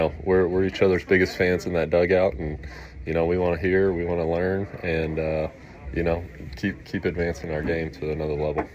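No technical faults are audible.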